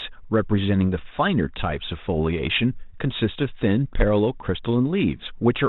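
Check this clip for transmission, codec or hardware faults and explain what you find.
Nothing here points to a transmission, codec or hardware fault, and the G.726 coding at 32 kbit/s, with its cut-off at 4 kHz, sounds the way that telephone path is meant to.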